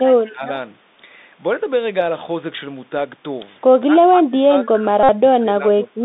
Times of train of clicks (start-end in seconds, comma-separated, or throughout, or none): none